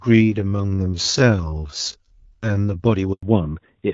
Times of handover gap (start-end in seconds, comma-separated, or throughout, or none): 3.13-3.23